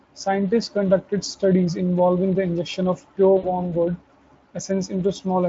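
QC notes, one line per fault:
3.37–3.73 s: VoIP packet loss concealed by the speech codec. About 60 ms of audio went missing, which fits three 20 ms frames lost. The decoder bridged the gap by carrying forward its last pitch and spectral envelope at steadily falling gain, so the speech smears into a short, buzzy tone or coloured noise that fades out. Each decoded frame builds on the one before, so the Speex-coded speech stays thin and distorted until about 3.73 s.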